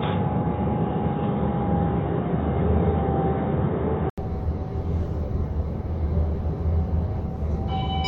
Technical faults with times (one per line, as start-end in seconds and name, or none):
0.00-4.18 input switched to a poorer device